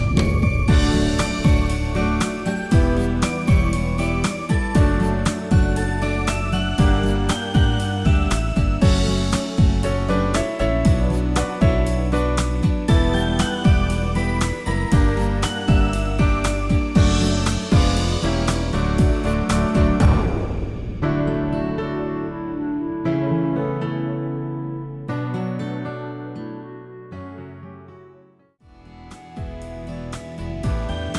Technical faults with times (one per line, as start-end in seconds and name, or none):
none